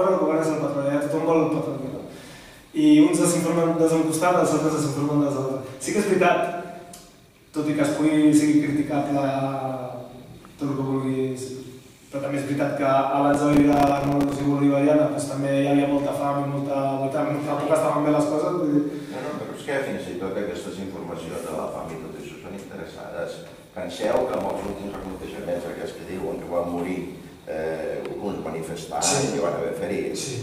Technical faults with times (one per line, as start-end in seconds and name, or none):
13.34-14.44 processor overload crackle
24.04-25.19 processor overload crackle